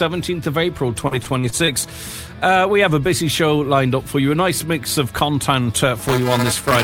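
From 1.07 to 1.69 s there's repeated packet loss: five short gaps, the longest 39 ms, each patched by stretching the last sound, so it turns choppy and robotic. Then from 5.99 s to the end comes buffer tearing. Writer and reader have crossed, splicing a small, few-milliseconds-old slice into each buffer, giving a 375 Hz buzz that fits a 128-sample buffer.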